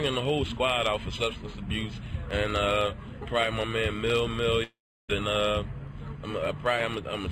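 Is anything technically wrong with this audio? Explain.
Yes. From 4.63 to 5.10 s the sound decays into a fading buzz, then silence, and resumes with about 460 ms missing. This is likely a long network dropout. Unlike a brief concealed glitch, the lost stretch never returns.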